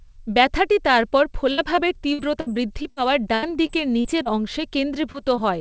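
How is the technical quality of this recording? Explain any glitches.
The recording has two stretches of choppy packet loss and two brief dropouts, heard over a call path whose band stops at 8 kHz, consistent with G.722 at 64 kbps.

From 1.52 to 2.98 s and from 3.34 to 4.33 s, repeated packet loss (robotic sound) appears. Gaps of up to 61 ms and 81 ms are patched by extending the previous sound, which makes it choppy. On a spectrogram these show as smeared, repeated blocks.

Short concealed packet loss occurs at 5.12 to 5.16 s and at 5.36 to 5.43 s. Each lost 20 ms was filled from the preceding audio, producing a brief smear.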